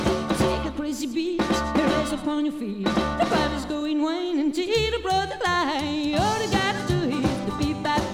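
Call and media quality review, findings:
Nothing stood out on listening; no findings to raise for this recording.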